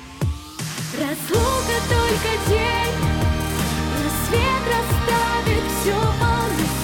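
No technical faults can be heard anywhere in the audio; the signal holds steady without interruptions, distortion, or level problems.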